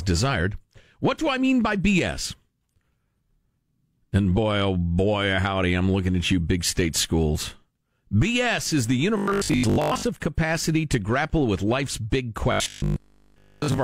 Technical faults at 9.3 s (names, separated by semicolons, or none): robotic sound from repeated short buffers